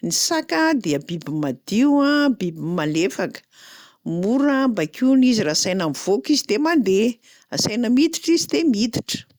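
No technical faults are audible.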